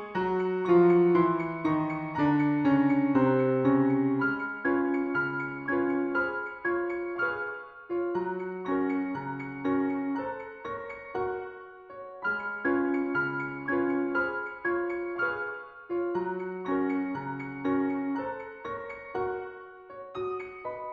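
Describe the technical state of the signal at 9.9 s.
At 9.9 s the signal is intact, with no fault present at that moment.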